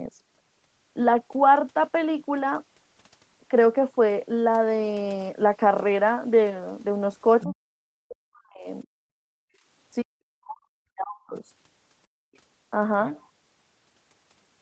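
Around 7.41 to 7.54 s a faint second voice, about 15 dB under the talker, slips in. That's the other side's voice leaking through, likely because the echo canceller left some loudspeaker sound behind. Right after, from 7.44 to 8.67 s, at 8.83 to 8.92 s, and again from 10.03 to 11.42 s, the speech is suppressed in double talk. The talker's voice sinks by as much as about 40 dB, most likely because the canceller couldn't tell it apart from the echo. The background is also gated by the echo canceller from 9.2 to 9.66 s and from 12.07 to 12.34 s. The room sound drops out by about 40 dB and about 37 dB, then comes back.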